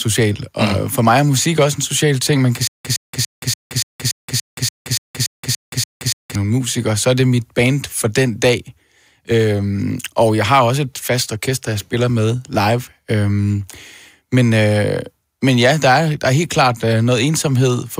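From 2.67 to 6.35 s comes a stutter with silent gaps. One 114 ms fragment repeats twelve times, each followed by 174 ms of digital silence, until "nogle musikere så er". Unlike random dropouts, it is an identical burst on a steady 288 ms cycle, so a stalled stream likely replayed its last fragment on each retry.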